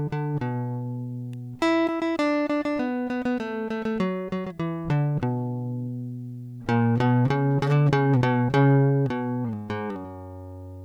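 At 1.33 s, a single sharp snap sits on top of the music. It is an electrical switching spike. It lasts only a moment, about a millisecond. It is fairly quiet, peaking around -30 dBFS. The cause is likely a nearby switch, motor or static discharge. That creates a brief arc, and the audio line picks it up as a click.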